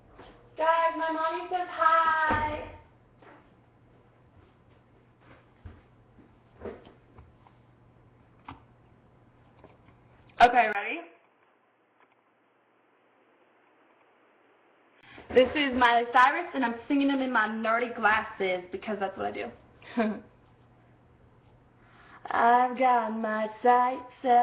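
From 10.73 to 15.03 s the audio turns dull and boxy, quieter, with nothing above 3.4 kHz, a brief dropout and a hiss floor underneath: likely an input switched to a poorer device.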